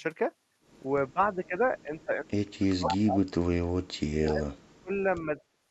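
Speech suppressed in double talk first appears at 1.09 to 1.55 s and 1.83 to 2.25 s, where the speech dips by about 15 dB. It returns far more deeply at 2.59 to 3.5 s, dropping by about 40 dB. The likely cause is an echo canceller that could not separate the near talker from loudspeaker echo while the far side spoke, so it turned everything down.

Inside that stretch, an echo leak at 2.88 to 2.97 s lets through a brief scrap of speech delayed by 242 ms, only a little quieter than the direct sound. This likely happened because echo from a loudspeaker reached the microphone and the canceller failed to remove all of it.

Suppression resumes at 3.98 to 4.98 s, again dropping by about 40 dB. A final short dip of about 25 dB follows at 5.52 to 5.57 s.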